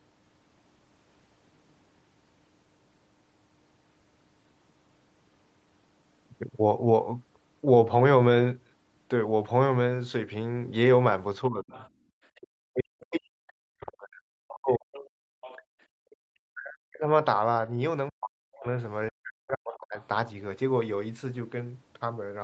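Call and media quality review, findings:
Speech suppressed in double talk, 11.49 to 19.97 s: echo canceller likely unable to separate near talker from loudspeaker echo during overlap. Talker repeatedly dipped, deepest around 40 dB, about five seconds affected in total.

Other side's voice leaking through, 11.76 to 11.89 s and 14.93 to 15.56 s: residual loudspeaker echo likely not fully cancelled at the microphone. Faint second voice, well below the talker, stronger in the later stretch.

Background gated by the echo canceller, 12.05 to 12.10 s and 15.21 to 16.15 s: hard microphone attenuation while the loudspeaker played. Room tone drops out, about 21 dB then about 34 dB, briefly each time.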